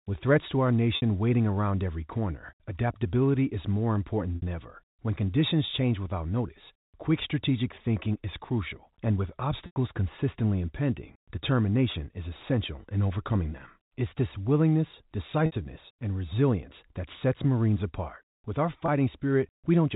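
Packet loss with pitch repetition interrupts the speech at 0.96, 4.36, 9.66, 11.92, 15.46 and 18.86 s. The gaps last 60, 60, 100, 20, 60 and 20 ms. Each is bridged by repeating the last pitch period, giving a brief held buzz that fades into silence in the longest gap, heard through the narrow G.711 telephone band.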